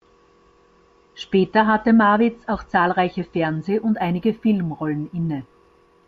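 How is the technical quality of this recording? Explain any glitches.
The recording has one fault in its last part. From 3.70 s to the end, right after "auch zahlreiche", there is imaging from linear upsampling. The speech was raised from 16 kHz to 44.1 kHz by straight-line interpolation, which dulls the top of the band and leaves a very faint mirrored copy between 8 and 16 kHz. That copy gives sibilants a light metallic shimmer. Unlike aliasing, the stray energy sits above the original band rather than folding down into it.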